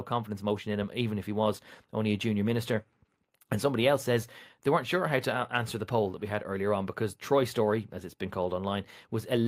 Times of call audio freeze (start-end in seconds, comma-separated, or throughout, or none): none